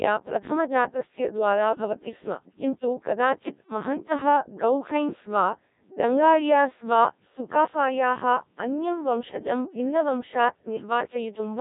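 Codec 2 vocoder damage runs through the whole clip. It is heavy, with the thin, buzzy quality that fits the 1.3 kbit/s mode. Rather than keeping the waveform, this kind of coder transmits only pitch, voicing, energy and a coarse spectral envelope, then rebuilds the speech from sine waves at the receiver. The result sounds robotic and synthetic, and nothing is present above 3.8 kHz, leaving the speech muffled and narrow.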